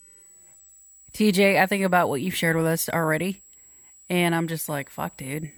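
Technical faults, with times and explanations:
Throughout: switching supply whistle, a faint tone wandering between 7.7 and 7.9 kHz about 30 dB below the speech, from a power supply switching in audible burst mode or beating with another one.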